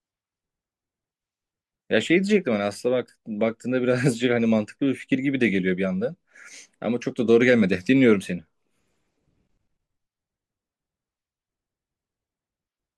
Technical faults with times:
none

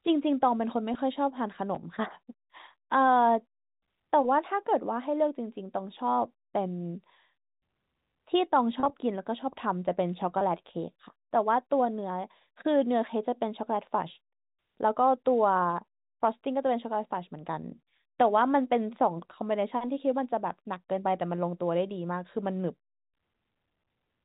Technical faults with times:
0.94 packet loss with pitch repetition
1.75-1.77 chunks out of order
8.80-8.90 packet loss with pitch repetition
10.39-10.41 packet loss with pitch repetition

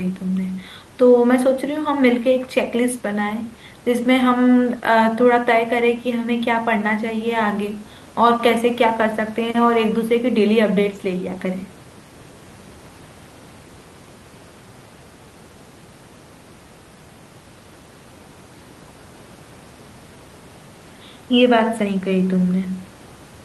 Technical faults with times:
none

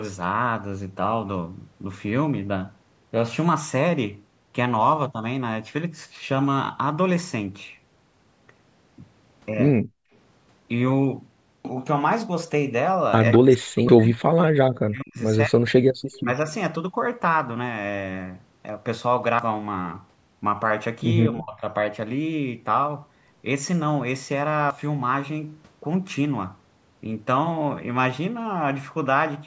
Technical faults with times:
9.82-10.11 background gated by the echo canceller
11.65 dropped buffer (overrun)
13.33-13.39 echo leak
13.39-15.18 speech suppressed in double talk
13.89 dropped buffer (overrun)
15.46-15.75 speech suppressed in double talk
16.12-16.20 echo leak
16.23-16.30 speech suppressed in double talk
18.69 dropped buffer (overrun)
19.39 dropped buffer (overrun)
21.29-21.62 speech suppressed in double talk
24.70 dropped buffer (overrun)

